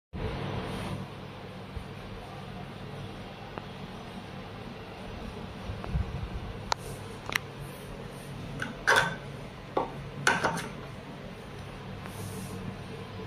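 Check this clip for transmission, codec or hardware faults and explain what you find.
There are four loud pops. They fall at 3.58–3.60, 5.84–5.86, 7.30–7.32 and 12.06–12.08 s. Each sharp, brief thump stands about 15 to 20 dB above the sound, which continues underneath. A voltage pulse from a plug, switch or static discharge is the likely cause.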